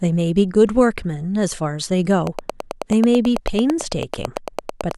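A speech recording carries a train of clicks from 2.27 s to 4.92 s: around thirty sharp, similar ticks at a steady 9.1 per second, peaking roughly 10 dB above the speech and audible through the pauses too. The waveform shows them as evenly spaced narrow spikes, and the spectrogram shows them as a comb of thin vertical broadband lines. The regular spacing most likely points to interference from nearby equipment or a faulty connection or power supply.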